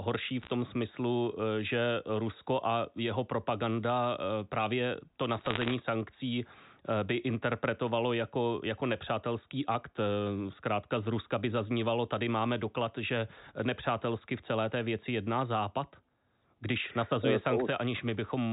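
Flipped bits on the G.711 digital phone line, at a rate of roughly half a percent to under one percent, corrupt individual samples. These bit errors on a digital phone line crackle with sharp ticks over intact speech at 0.42–0.50 s and 5.40–5.74 s, between "jeho propaganda právě to" and "sankcí by interpretovalo jako".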